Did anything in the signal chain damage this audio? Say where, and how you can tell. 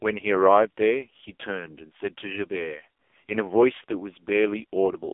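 Yes, at the codec stage: the AMR narrowband mobile codec runs through the whole clip. The speech sits in a 300 Hz to 3.5 kHz band with nothing above 3.6 kHz, and it sounds heavily buzzy and synthetic, which fits a very low AMR-NB mode around 5.15 kbps.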